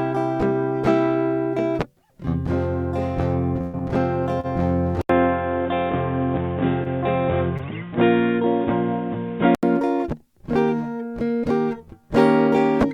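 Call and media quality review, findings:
Held, fading tone at 3.61–3.76 s, then the music jumps ahead by about 120 ms. Burst of packet loss: the receiver concealed roughly 118 ms by extending and attenuating the last sound, and the skipped audio is never recovered.

Brief drag at 4.40–4.47 s and again at 7.57–7.62 s, a sound held slightly too long. Short stall from a late packet: the jitter buffer ran dry, and the last sound was stretched by 34 ms and 22 ms respectively. Playback resumed where it left off, with nothing missing.

Dull, boxy music from 5.01 to 9.63 s, with no content above 3.8 kHz. It starts with an 80 ms silence, a new noise floor sits about 30 dB under the music, and loudness stays roughly the same. Likely cause: input switched to a poorer, narrower-band device, then switched back at 9.63 s.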